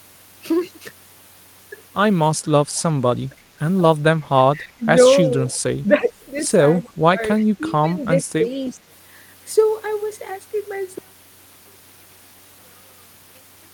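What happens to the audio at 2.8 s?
At 2.75 to 2.82 s a brief echo leak appears: a very faint copy of the speech, delayed by 320 ms, sits far below the live signal, around 35 dB down. It is likely a far-end loudspeaker whose echo canceller let a scrap of its microphone pickup return down the line. On a spectrogram it shows as a ghostly repeat of the harmonic pattern from 320 ms earlier. In the waveform it is only a low ripple riding under the main envelope.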